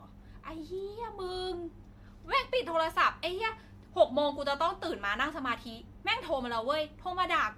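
Across the whole clip the speech has a swirly, hollow quality, with smeared consonant onsets and a watery shimmer that sounds heavier than a single lossy encode at this quality should produce. That points to generation loss, likely from the audio passing through an MP3 codec at around 96 kbit/s about five times. Each re-encode quantised on a shifted frame grid, stacking noise and spectral holes. Content extends only to roughly 19.9 kHz.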